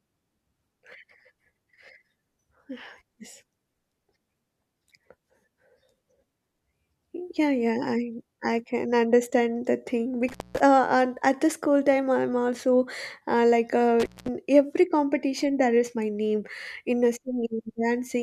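At 10.29 s, after "can understand the thing", and 14.00 s, after "I'm also uh like", intermittent contact opens the line for about 0.2 s. Crackle at each edge, unlike a clean digital dropout, marks a loose connector.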